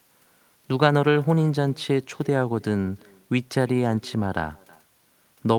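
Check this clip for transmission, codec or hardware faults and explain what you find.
There is one fault, present across the whole recording. Every phrase of speech is trailed about a third of a second later by a faint, thin copy, some 27 dB below the direct voice. This is echo with no canceller: a far-end loudspeaker feeds the microphone, and nothing subtracts that return before it travels back.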